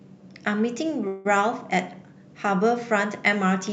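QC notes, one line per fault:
1.07–1.27 s, call audio freeze: the speech stops and the last sound is stretched into a fading buzz for about 0.18 s. Speech then resumes where it left off, with nothing lost, just later. The likely cause is delayed packets draining the jitter buffer.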